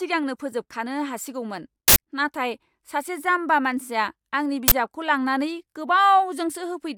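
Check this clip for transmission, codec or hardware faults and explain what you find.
Two uninitialised buffer faults interrupt the speech, at 1.88–1.96 s between "फोजोबखानो हासिगौमोन" and "नाथाय सासे जाम्बा", and at 4.68–4.72 s. Blocks of 80 ms and 40 ms were played before audio was written, so leftover memory came out as loud cracks or bursts of digital noise. Unlike a dropout's silence, these interruptions are loud.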